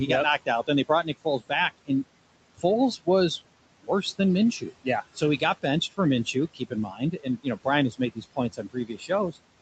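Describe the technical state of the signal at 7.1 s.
At 7.1 s the noise suppressor is misjudging parts of the speech as background, which puts the moment inside a stretch of speech cut by the noise suppressor running from 4.6 to 9.38 s. Quieter stretches of speech are pulled down along with the noise, by as much as about 21 dB, adding up to roughly a second and a half across that span. At this point soft consonants and word tails can sound swallowed or faint rather than cleanly ended.

Underneath that, noise suppressor artifacts are present here as they are throughout. The suppressor attenuates the bands it reads as steady noise frame by frame, cutting the room noise (which sits about 16 dB below the speech) by about 21 dB in gaps and letting it rise again under the voice. The residue can be heard pumping as it sinks and rises.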